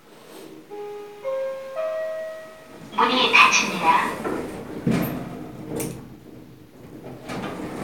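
Nothing in these everyday sounds points to a technical problem at any moment, so there's nothing here to flag.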